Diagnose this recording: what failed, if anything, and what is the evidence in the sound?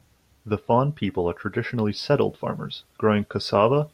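Nothing failed in this recording, and the sound gives no evidence of a fault at any stage.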